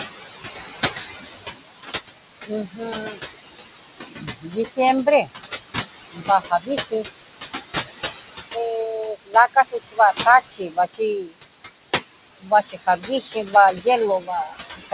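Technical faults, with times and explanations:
Throughout: noise suppressor artifacts. The suppressor pulls steady room noise down by about 15 dB frame by frame, so the background sinks in pauses and surges under speech. A spectrogram shows a patchy, blotchy noise floor that pumps with speech energy.
2.47–3.17 s, 4.07–5.28 s, 6.13–7.05 s, 9.15–11.35 s, 12.4–13.86 s, 14.2 s to the end: speech cut by the noise suppressor. Quiet parts of the speech were treated as noise and turned down with the background, by about 11 dB in the first span and up to about 21 dB at worst. The first three spans each lose somewhere between 0.3 and 0.4 s of sound, and the 9.15–11.35 s and 12.4–13.86 s spans lose closer to three quarters of a second each. Consonants and endings come out swallowed. On a spectrogram, weak fricative and tail energy vanishes into dark gaps, and the waveform shows abrupt dips within speech. 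The call path's G.711 mu-law coding, at 64 kbps with nothing above 4 kHz, narrows the band, so the swallowed consonants have little high-frequency detail left to carry them.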